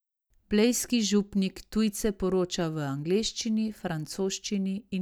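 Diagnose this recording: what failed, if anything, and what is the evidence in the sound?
Listening closely to the speech, nothing stood out as a failure at any stage of the chain.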